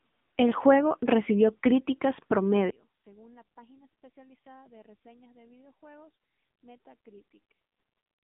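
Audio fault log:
Throughout, AMR narrowband mobile codec: the speech has gone through a 2G/3G-style phone codec, and the damage is plainly audible. Nothing gets through above about 3.7 kHz, and the line band runs roughly from 150 Hz to 3.6 kHz, so it's thin and muffled. At around 7.4 kbps the vocal-tract model only gets a few pulses per subframe, which is why the voice comes out buzzy and a bit synthetic.
2.70 to 8.31 s, one channel inverted: from 2.70 s to the end, the level falls by about 29 dB. That drop is what you get when the two stereo channels cancel, most likely because one of them has flipped polarity and the pair is being summed to mono. The centred speech mostly disappears, and what's left is only the small difference between the channels, so it sounds faint.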